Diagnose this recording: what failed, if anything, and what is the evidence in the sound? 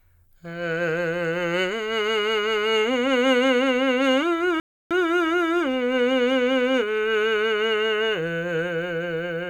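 A rebuffering stall at the playback stage: at 4.60 s the music drops to silence and resumes at 4.91 s exactly where it broke off, with no material skipped. The player's download buffer ran dry and it paused, adding 0.31 s to the timeline.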